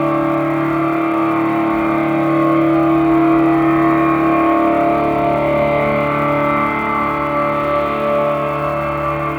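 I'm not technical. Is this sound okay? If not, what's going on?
No. A steady crackle, like fizzing, runs through the whole music clip. It keeps going even in the quiet moments. This is an unreliable data bit. One digital line is faulty, so random samples come out wrong, each making a tiny click of the same size.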